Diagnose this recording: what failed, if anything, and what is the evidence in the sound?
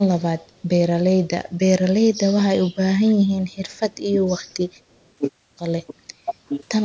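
Call processing is the stage to look at. The speech gets pushed down in bursts at 2.3–2.38 s, 2.74–3.17 s, 3.57–3.64 s, 4.12–4.19 s and 4.47–4.7 s, dipping by about 10 to 30 dB. That's likely speech suppressed in double talk: the echo canceller couldn't untangle the talker from loudspeaker echo, so it ducked both.

Also call processing: from 4.91 to 5.09 s there's a faint delayed copy of the speech trailing 302 ms behind, sitting around 40 dB under the direct sound. That's likely an echo leak, with the loudspeaker end's canceller letting some of its microphone pickup back down the line.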